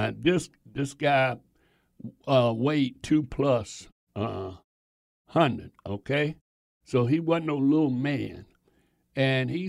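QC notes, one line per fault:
No faults are heard in this speech clip. In the pauses the background fades to silence and returns in time for the next sound, with only very quiet sound lost.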